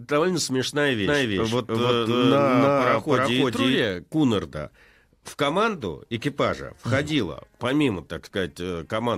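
From 1.03 s to 3.79 s the speech carries a doubled audio track: a second full-band copy trails by roughly 300 ms at about equal level, with no decay or room colour, and switches on and off abruptly. Likely cause: a slower duplicate capture path.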